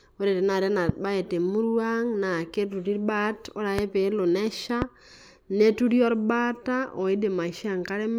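Loud pops hit at 0.89–0.92 s, 3.79–3.81 s and 4.82–4.84 s: single sharp spikes well above the speech, likely a voltage step from a plug, switch or static.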